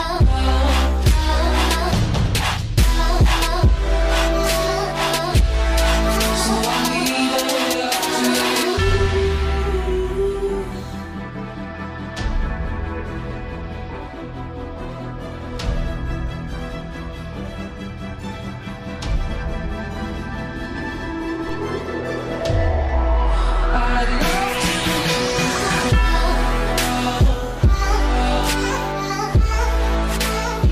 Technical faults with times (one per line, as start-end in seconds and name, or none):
21.49 DC step